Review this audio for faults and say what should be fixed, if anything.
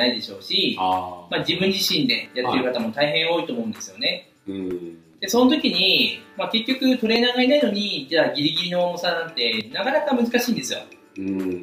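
Four skips occur at 2.26, 4.71, 7.16 and 9.61 s, one every 2.45 s, where the sound jumps forward with no gap, which points to audio missing between chunks. The likely cause is a process handling 2.5 s blocks and dropping roughly a twentieth of a second at each handover. On a waveform, each spot is an abrupt splice where the trace does not continue smoothly. A spectrogram shows a thin vertical seam where the patterns on either side fail to line up. To prevent it, use overlapping or double-buffered chunk handling so each new block starts exactly where the last one ended.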